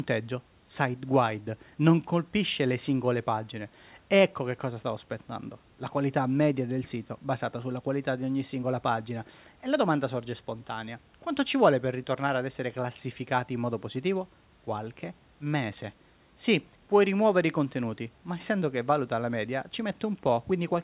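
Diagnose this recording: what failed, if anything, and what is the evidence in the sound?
Nothing failed in this recording, and the sound gives no evidence of a fault at any stage.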